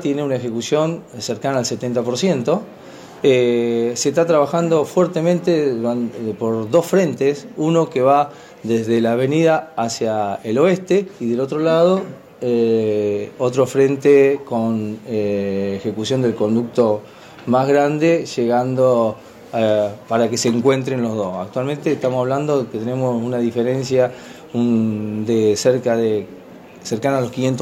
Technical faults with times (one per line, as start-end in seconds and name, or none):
none